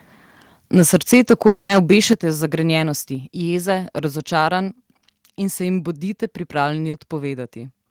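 From 0.76 to 2.13 s the loudest syllables carry a harsh, crackly edge, with peaks driven about 6 dB past the converter's limit and a few percent of samples flattened at the limit. This is likely microphone overload, with input gain set too high for the converter.

At 1.14 s the level drops by about 2 dB in a single step, likely a microphone volume stepped down by the call software reacting to the clipping. A larger step of about 7 dB follows at 2.13 s, as the distortion ends. Further 2 dB steps occur at 3.15 s, just before "jeze razočaranj", and at 5.19 s, just after "jeze razočaranj" and before "in se jim". Voice and background fall together each time.

Between 1.47 and 1.71 s about 220 ms of audio is missing. The receiver covers the whole gap by stretching the last sound into a fading fill rather than leaving silence, and then resumes without the lost portion. This is likely a long network dropout.

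From 6.89 to 6.95 s a short concealed packet loss of about 40 ms is heard as a brief smear where the decoder extrapolated the preceding sound before blending back into the real signal.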